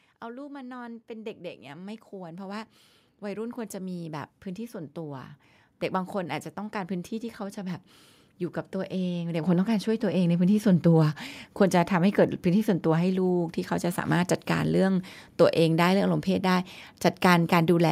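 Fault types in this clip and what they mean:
automatic gain rising: The speech and its background swell together, by about 13 dB from 0.21 to 7.88 s and by about 6 dB from 8.71 to 10.93 s, because the automatic gain control judged the input too quiet and steadily raised its gain.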